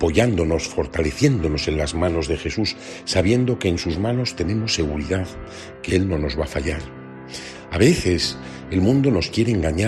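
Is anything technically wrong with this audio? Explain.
No, there's nothing technically wrong with this audio.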